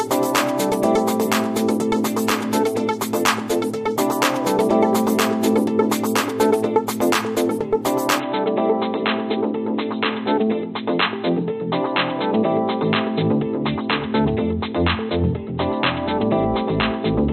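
At 8.20 s the audio turns dull and boxy through to the end, with nothing above 4.1 kHz, a drop of roughly 5 dB and a new, faint noise bed about 40 dB down, with no gap at the join. This is likely an input switched to a poorer device. A plain filter or codec change would narrow the band without also shifting level and background noise.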